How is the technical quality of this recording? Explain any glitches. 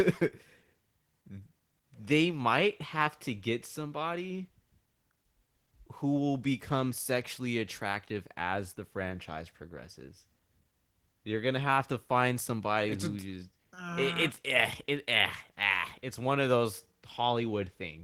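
The speech has plainly audible coding damage from start to finish. It sounds hoarse and faintly robotic, though the top end stays open up to about 20.2 kHz. This is Opus voice compression in hybrid mode: a linear-prediction coder handles the band below 8 kHz and codes its excitation coarsely, while a transform layer fills in above. The roughness fits a low bitrate near 16 kbps in 20 ms frames.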